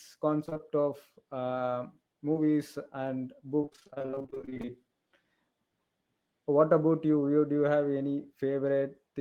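A speech recording, the clip has repeated packet loss (robotic sound) in two stretches, from 0.45 to 0.61 s and, far longer, from 3.61 to 4.70 s. In both, roughly half of the span is missing audio that the receiver patched by extending the last sound, with each hole no longer than about 24 ms. Because the holes keep coming, the speech turns choppy, with pieces missing, rather than a single blip. The first stretch holds only a few holes, while the second is a dense run of them lasting over a second. A separate short concealed packet loss at 2.33 to 2.37 s is different. About 20 ms went missing once and was bridged by continuing the preceding sound before blending back. That leaves a brief smear or wobble with clean speech on either side, rather than a sustained robotic run.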